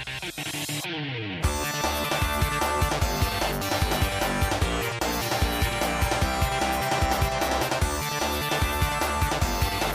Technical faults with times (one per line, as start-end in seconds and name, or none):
2.05-2.09 compressed frames skipped